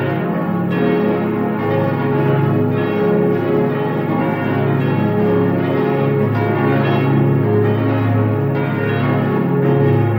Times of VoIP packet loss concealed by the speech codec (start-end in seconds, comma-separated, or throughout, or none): none